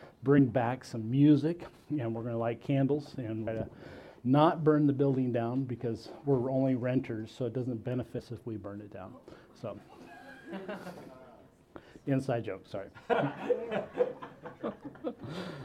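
Damaged data in a compressed stream at 0.37, 3.46, 8.18 to 8.20, 10.96 and 13.12 s: corrupted frames make the decoder lose sync, giving brief glitches.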